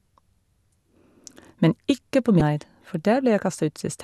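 Damaged data in a compressed stream appears from 2.38 to 2.41 s in this speech clip. Corrupted bytes in the encoded stream leave the decoder unable to read those frames cleanly, so it loses sync and hunts for the next valid frame header, producing a brief glitch.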